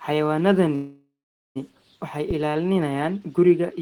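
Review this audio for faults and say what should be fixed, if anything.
From 0.75 to 1.58 s there is a call audio freeze. Packets were likely held up in transit, so the jitter buffer ran dry and the receiver carried the last sound forward as a fading buzz that drops to about 0.41 s of near silence. When delivery resumes the speech picks up exactly where it stopped, so roughly 0.8 s of filler has been inserted, nothing is lost, and everything after it arrives about 0.8 s later. A larger adaptive jitter buffer and a more stable network path would prevent it.

At 2.31 s a phantom power thump appears. A supply switching on or off at the live microphone input sent a voltage step through the coupling capacitors, producing a deep low-frequency thump that dies away within about 89 ms, with the event ending at 2.70 s. Switching phantom power only while the channel is muted or faded down would prevent it.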